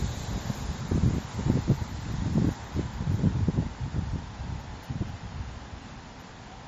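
From start to finish the sound carries plainly audible MP3 compression damage, likely from encoding at a low bitrate, which fits around 40 kbps. Nothing survives above 14.5 kHz, where the encoder cut the treble to save bits. What sets this apart from a simple low-pass filter is the watery, swirling texture underneath, as weak frequency lines drop in and out from frame to frame instead of the top end just going dull.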